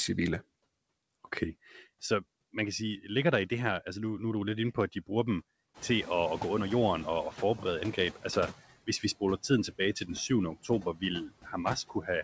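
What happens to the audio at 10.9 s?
Around 10.9 s the sound falls inside a stretch of speech cut by the noise suppressor, running from 10.63 to 11.02 s. The suppressor mistook parts of the speech for background noise and turned them down along with it, by about 11 dB at the deepest point and across roughly 150 ms in total. Those parts sound swallowed and faint. On a waveform the envelope dips. On a spectrogram the speech energy thins out in patches instead of tapering naturally.

The same moment also carries noise suppressor artifacts, which are present throughout. The suppressor lowers the frequency bands it judges to be steady noise, by about 19 dB, deciding frame by frame. The residual background pumps down in pauses and swells back under the speech. A spectrogram shows the noise floor flickering in blotchy, frame-sized patches, uneven in both time and frequency.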